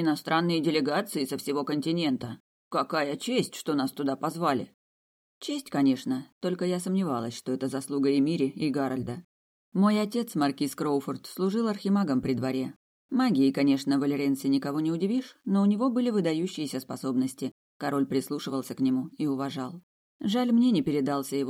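From start to finish the audio carries low bit depth without dither: a grainy, gritty distortion that tracks the sound, sitting roughly 50 dB below the signal. The likely cause is rounding to few amplitude steps, consistent with about 10-bit resolution, with no dither to decorrelate the error. A waveform zoomed in shows visible staircasing, and a spectrogram shows signal-following hash rather than a steady noise floor.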